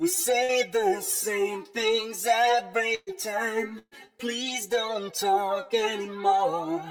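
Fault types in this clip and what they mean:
Burst of packet loss: a run of consecutive packets failed to arrive in time, so the receiver extended the last sound and faded it, then resumed later in the stream with the intervening audio gone. It occurs three times, at 0.43 to 0.52 s (about 50 ms filled, 60 ms missing), 2.95 to 3.10 s and 3.79 to 3.94 s. The later two each fill about 120 ms with a decaying continuation, ending in 20 ms and 40 ms of silence respectively.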